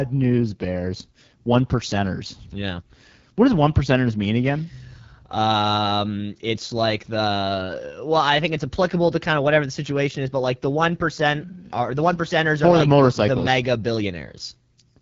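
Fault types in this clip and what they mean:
AMR wideband (HD Voice) codec: The speech has a plainly audible rough, raspy grain, which fits the 8.85 kbit/s AMR-WB mode. A spectrogram shows nothing above 7.5 kHz, and the 6.4 to 7 kHz band holds shaped noise without harmonic striations.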